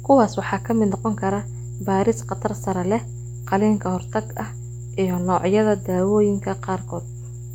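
A steady low 60 Hz drone runs under the speech from start to finish, only about 10 dB below it: mains hum, from power-line interference leaking into the signal path.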